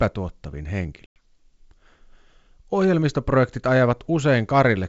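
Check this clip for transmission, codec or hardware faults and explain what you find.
One transmission fault is audible, on a G.722 wideband call at 64 kbit/s whose coding adds no more than faint damage.

Packet loss on the ADPCM call, 1.06 to 1.17 s: about 100 ms of audio, consistent with several lost packets, is replaced by a hard-edged silent hole. The decoder's adaptive predictor and step size drift from the sender's, so speech returns slightly distorted, settling within tens of milliseconds.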